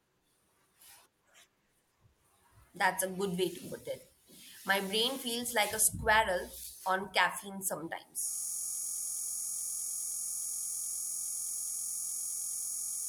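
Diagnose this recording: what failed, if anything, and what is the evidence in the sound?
System hang loop at the driver/buffer stage: from 8.31 s to the end, one 23.22 ms slice repeats exactly, fitting a 1024-sample ring buffer, as a steady 43.1 Hz buzz rather than mains hum.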